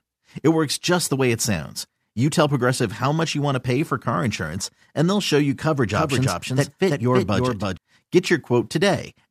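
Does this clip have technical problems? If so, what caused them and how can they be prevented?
Yes. A doubled audio track runs from 5.93 to 7.77 s, starting right after "they'll show you coverage". A second full-band copy of the speech trails the original by roughly 300 ms at a somewhat lower level. It has no decay or room colour and switches on and off abruptly, so it is not a natural echo. The likely cause is the same signal reaching the mix twice, through a slower second capture path or an edit leaving two overlapping copies out of step. To prevent it, route each source through only one capture path and check edits for stacked duplicate regions before export.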